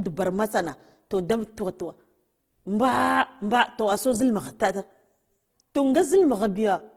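Throughout, the speech carries plainly audible Opus compression, likely its CELT music mode at a rate fitting roughly 16 kbps. Starved bands are filled with folded or noisy content, so it sounds grainy and rough rather than MP3-style swirly. Bandwidth stays full, up to about 20.2 kHz.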